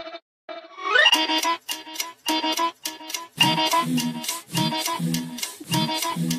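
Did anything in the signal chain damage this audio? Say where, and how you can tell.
No, nothing along the chain leaves an audible mark on this audio, so there is no stage to point to.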